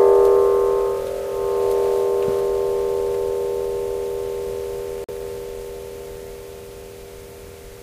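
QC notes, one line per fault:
5.04–5.11 s, corrupt frame muted. The sound drops abruptly to silence for about 70 ms, then resumes in time. The decoder rejected damaged compressed frames and the player filled the gap with silence. The gap's length points to roughly three frames.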